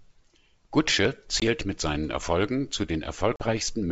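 At 1.40 s, just before "mit seinen", packet loss on the ADPCM call leaves a hard-edged silent gap of 20 ms, about one packet. At 3.36 s a second gap lasts 40 ms, about two packets. Each time, the decoder's predictor and step size drift from the sender's. Speech returns briefly distorted, settling by 1.43 s and 3.45 s.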